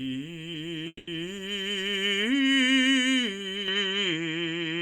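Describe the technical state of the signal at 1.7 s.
At 1.7 s the music plays through intact, with no dropout, click, distortion or other fault in the signal at that moment.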